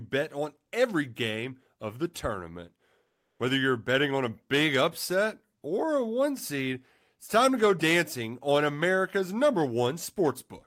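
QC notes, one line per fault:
3.07–3.39 s, comfort noise in place of the background: after "game of the tournament", flat synthetic noise about 4 dB off replaces the background; likely Opus DTX.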